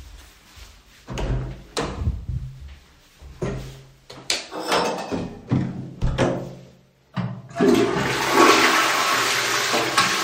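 Everyday sounds, with no technical faults audible anywhere.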